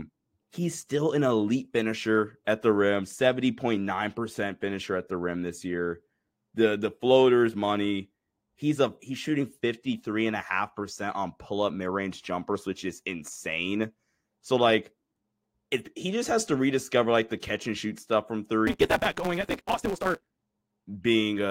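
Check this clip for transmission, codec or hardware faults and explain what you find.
One fault is audible: a block size mismatch (truncated) from 18.67 to 20.27 s. One stage writes longer blocks than the next reads, which fits a 256-sample read, so each block's tail is discarded. The speech runs 1.88 times fast at near-normal pitch, under a 172 Hz buzz.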